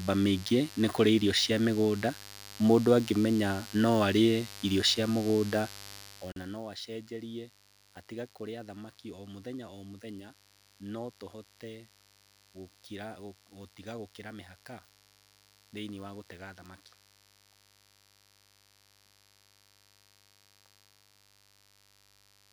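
A steady, raspy buzz sits under the speech from start to finish, roughly 20 dB below it. This is mains buzz at 50 Hz: sharp switching spikes from a dimmer, rectifier or unshielded cable leak in twice per mains cycle, spreading harmonics up into the kilohertz range.

At 6.32 s the speech drops out abruptly for about 42 ms, then resumes exactly where it stopped, with smeared edges. This is a gap at a join of encoded pieces: separately encoded sections were spliced without trimming the encoder's start delay and end padding.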